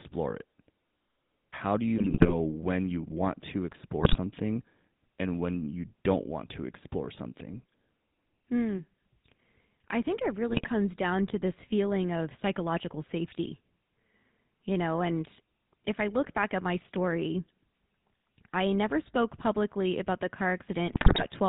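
It's a speech clip, and the whole thing has the buzzy, gravelly edge of the GSM full-rate codec, which fits a 13 kbps GSM full-rate stream. Nothing comes through above 4 kHz, and the codec models the vocal tract and drives it with a coarse, regularly spaced pulse excitation. On top of that there are four bursts of GSM bit errors: 1.98 to 2.34 s, just before "when you want to"; 4.01 to 4.16 s, right after "when you want to"; 10.49 to 10.69 s; and 20.86 to 21.26 s, after "spoke publicly about the". In each one, corrupted filter, pitch or gain values hit the decoder over a run of frames, so the sound breaks into squawks, pops and gargling.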